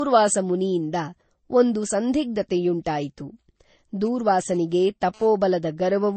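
From the start of the speech, the sound carries two layers of lossy-codec damage at once, most likely from transcoding between lossy codecs: an MP3-style coding at around 32 kbit/s followed by a Vorbis pass at a similar rate. The top end stops at about 8.4 kHz, the lowest cut-off in the chain. Smeared, swirly high-frequency artefacts from the first stage sit under the second codec's own warbling. The second pass has spent bits re-encoding the first's errors.

From 4.06 s to 5.27 s, GSM phone buzz cuts in, about 28 dB below the speech. Its hard, raspy tone at 217 Hz is dense with harmonics and has nothing to do with the speech. The audio circuit is rectifying the pulsed radio bursts from a nearby 2G phone, which repeat 217 times a second. The buzz comes and goes instead of running continuously, which points to the phone transferring data rather than holding a call.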